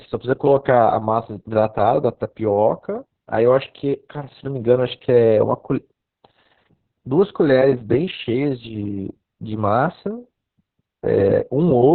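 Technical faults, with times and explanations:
Throughout, Opus voice compression: the speech is boxed into a narrow band with nothing above about 4.4 kHz, so it's muffled, and the coarse low-rate excitation coding makes it hoarse and a bit robotic, which fits SILK in narrowband mode at around 6 kbps.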